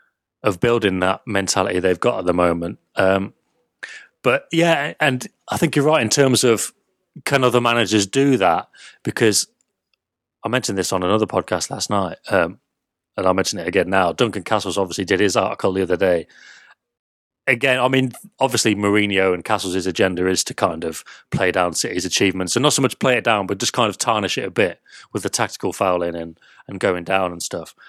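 Nothing in this recording stands out as a technical problem; the audio runs along without any faults worth pointing to.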